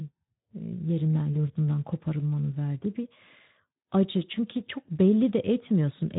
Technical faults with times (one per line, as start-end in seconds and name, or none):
1.33-1.47 VoIP packet loss concealed by the speech codec